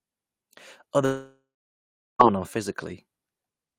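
It's a speech clip with a long network dropout from 1.05 to 2.21 s: the last sound smears into a fading buzz, then about 0.72 s of dead silence, and the speech picks up again with roughly 1.14 s gone, likely from the stream stalling and concealment running out.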